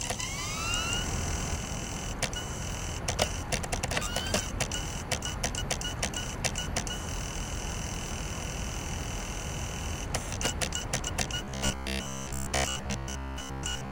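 From the start until 1.56 s, the sound is doubled. A second full-band copy trails about a fifth of a second behind, at roughly equal level. It has no decay or room colour, and it stops abruptly. This doubled audio track is likely a second capture path or an edit holding two copies out of step.

From 11.45 s to the end at 13.92 s, the sound turns robotic. A rigid, metallic buzz at 66.8 Hz rides over it, still loosely following its shape. The likely cause is repeated short buffers, each about 15 ms, replayed for most of that stretch while the real audio is skipped.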